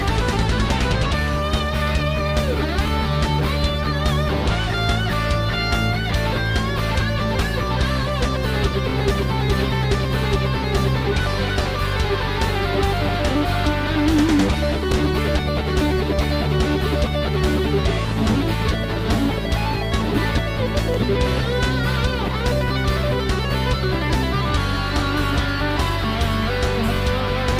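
Overlapping chunks cause short stutters at 2.87–2.90, 8.90–8.92, 14.92–14.94, 20.94–20.97 and 26.97–26.99 s. Every 6 s, about 23 ms replays at each join.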